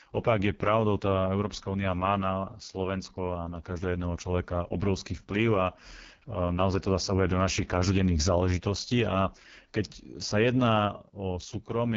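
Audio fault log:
Throughout: AMR wideband (HD Voice) codec. The speech has the rough, raspy texture of heavy AMR-WB damage, which fits the lowest 6.6 kbit/s mode. At that rate the pulse-driven vocal tract model has too few bits to follow the speech closely, so the excitation comes out coarse and buzzy. Above 6.4 kHz there is only shaped noise rather than real detail, and nothing is present above 7.5 kHz.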